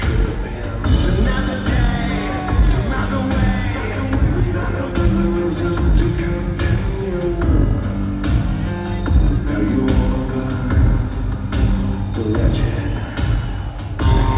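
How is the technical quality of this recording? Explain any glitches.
The technical quality of the recording is sound, with no glitches to explain.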